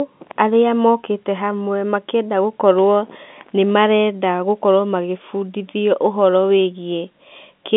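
No technical faults are audible.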